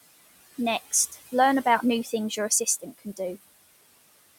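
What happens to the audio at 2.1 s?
Speech cut by the noise suppressor: from 2.04 to 2.13 s, just after "learn about new", the suppressor mistakes speech for noise and turns it down by about 9 dB, so it sounds faint rather than silent.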